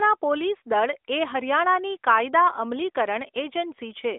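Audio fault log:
No faults found.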